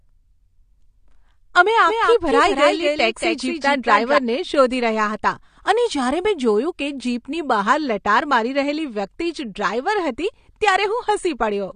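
AAC compression runs through the whole speech clip, from the start. Nothing is present above 9.7 kHz, so the top of the spectrum is missing and the sound is dulled. The codec damage is plainly audible: the coder has spent too few bits on the frequency lines of each frame, and the result fits AAC-LC at a low bitrate around 32 kbps. The likely cause is that the audio was squeezed through a low-bitrate encode, leaving it smeared.

A doubled audio track appears from 1.88 s to 4.18 s. A second full-band copy of the speech trails the original by about 200 ms and sits about 5 dB lower. It adds no decay or room colour, so it sounds like a distinct, dry repeat. It cuts in and out abruptly at those times. This is likely the same audio captured a second time through a slower path and mixed back in.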